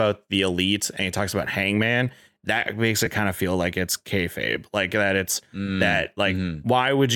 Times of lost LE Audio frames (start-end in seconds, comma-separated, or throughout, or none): 3.06